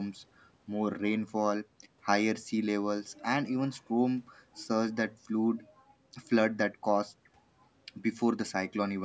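No faults detected; the speech shows normal call microphone processing, with the lowest bass rolled off and nothing above 8 kHz.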